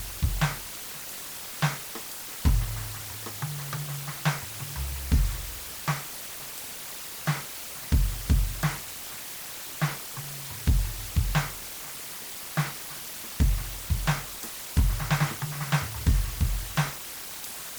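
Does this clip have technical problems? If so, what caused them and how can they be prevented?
Yes. The music carries low bit depth with dither from start to finish: a constant, even hiss roughly 10 dB below the signal, with no distortion, which fits a 5-bit word length. The dither turns the coarse rounding error into steady white noise. Keep at least 16 bits through every processing and export stage.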